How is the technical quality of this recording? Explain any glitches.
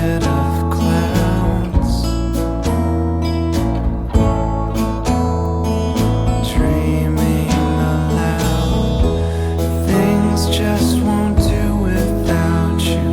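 No glitches turn up anywhere in the recording; the signal stays technically sound throughout, with nothing in it that calls for explanation.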